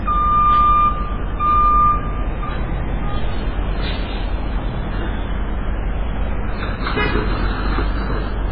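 From start to finish the audio is dull, with nothing above 5 kHz, and it has a heavy watery swirl where weak detail flickers in and out. That's likely MP3 compression starved of bits, which fits a very low bitrate around 16 kbps.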